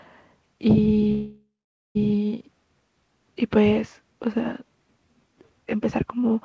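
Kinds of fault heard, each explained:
Call audio freeze: from 1.12 s to 1.97 s the sound stops advancing. The last fragment is carried on as a fading buzz that decays into about 0.46 s of silence, then the audio resumes exactly where it stopped, with nothing missing. The likely cause is packets held up in transit draining the jitter buffer, so everything afterwards runs about 0.83 s late. The 8 kHz band limit throughout fits a G.722 call path.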